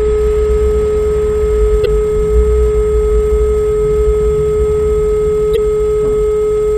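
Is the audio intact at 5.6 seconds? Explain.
No. From 5.53 to 5.58 s a brief glitch cuts through the sound. This is damaged data in a compressed stream: corrupted bytes there made the decoder misread the frames, lose sync and hunt for the next valid frame header.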